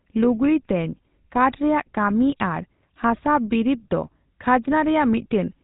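From start to finish the speech carries GSM full-rate codec damage: a buzzy, gravelly roughness and nothing above 4 kHz. The vocal tract is modelled and driven by a coarse, regularly spaced pulse excitation, consistent with the 13 kbps first-generation GSM coder.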